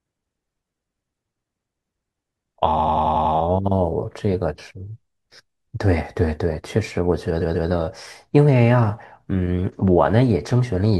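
From 2.78 to 3.33 s, repeated frames replay a 92.9 ms block six extra times, and from 7.40 to 7.68 s a 139.3 ms block plays twice more. Each is a stutter, visible as identical tiled spectrogram slices.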